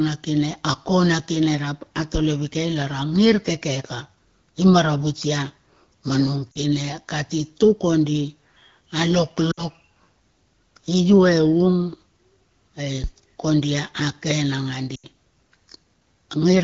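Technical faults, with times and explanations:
6.52 s to 15.07 s, lost AMR speech frames: brief drop-outs at 6.52 s (40 ms), 9.51 s (60 ms) and 14.95 s (80 ms), which fit runs of two, three and four 20 ms frames. Radio errors made these frames fail their checksum. The wideband decoder then repeated the last good pitch and vocal tract settings at falling gain, so each spot drops to near silence within two frames, and the voice comes back briefly rough.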